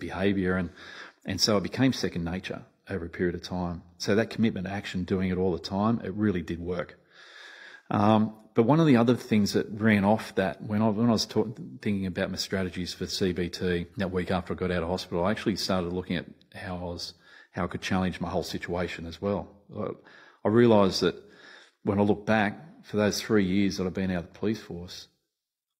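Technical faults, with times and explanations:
13.89–13.94 s, stream segment skipped: the speech jumps abruptly ahead with a brief blip before "that week after I", likely a failed stream segment the player passed over.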